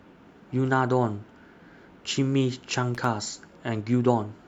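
At about 2.95 s there's a short burst of loose connector crackle, lasting roughly 0.11 s until 3.06 s. A worn or dirty contact is making and breaking as it moves, chopping the speech, so you get that ragged, scratchy crackle.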